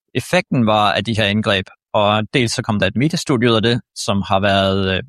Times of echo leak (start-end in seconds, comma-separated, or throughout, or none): none